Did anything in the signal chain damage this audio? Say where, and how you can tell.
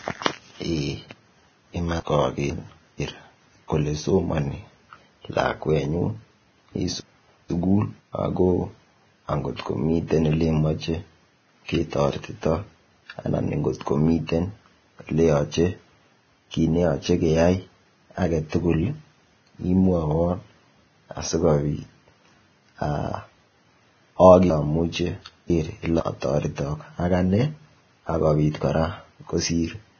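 Yes. Throughout, the speech sounds heavily hissy and grainy with nothing above 6.5 kHz, likely Vorbis compression at a low bitrate around 18 kbps coarsely quantising the treble.

There are also chunks out of order, from the network or storage stage: half-second blocks play one slot late at 2.0–3.0 s and 7.0–8.0 s, and two slots late at 24.5–26.0 s, jumbling those moments.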